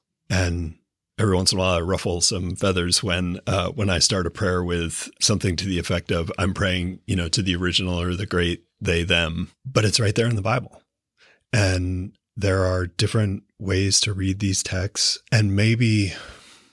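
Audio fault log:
No fault can be heard anywhere in this speech recording. Nothing in it calls for an entry of its own in this log.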